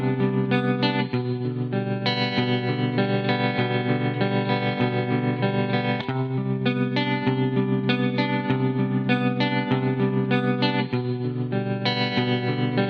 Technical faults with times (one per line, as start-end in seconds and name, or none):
none